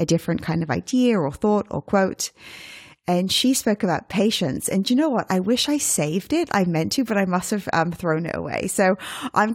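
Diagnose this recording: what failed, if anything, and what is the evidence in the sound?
Nothing in the signal chain failed: the speech recording runs without any dropout, glitch or other disturbance that would point to a problem at any stage from capture to playback.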